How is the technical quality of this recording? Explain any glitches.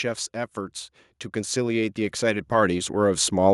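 The one real problem is the level: there's a steady automatic gain rise running through almost the entire recording. From 0.32 s to 3.48 s, the automatic gain control evidently decided the input was too quiet and kept turning itself up, ending about 10 dB higher than where it started. Because the boost is applied to the whole signal, the speech and the room noise under it swell together, so you hear a slow, continuous climb in loudness rather than any sudden jump.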